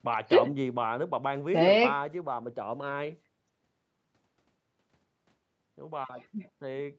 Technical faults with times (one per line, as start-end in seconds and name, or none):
none